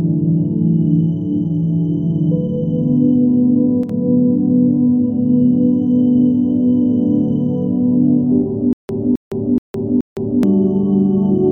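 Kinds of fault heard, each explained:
One channel drops out: From 3.83 to 3.89 s the sound briefly dips by about 6 dB for those 60 ms. Likely one stereo channel went missing, so the mono sum carried only half.
Stutter with silent gaps: From 8.73 to 10.43 s a 0.26 s burst repeats four times, each followed by 0.16 s of dead silence, recurring every 0.43 s. The player likely stalled and replayed its last fragment on each retry, losing the audio meant for that stretch.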